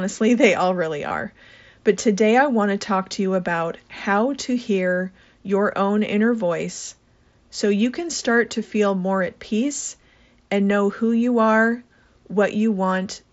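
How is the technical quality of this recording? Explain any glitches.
The recording has one brief glitch, at 1.08 to 1.11 s, just after "they all really". It is concealed Bluetooth headset packet loss. About 22.5 ms of audio never reached the phone, which fits a short run of three 7.5 ms mSBC frames. The receiver filled the gap by repeating the best-matching stretch of the preceding waveform. The fill is short, so it comes through as a brief buzzy hold at full level with a slight warble as the real audio resumes. The link itself runs wideband mSBC, with speech band-limited to 8 kHz.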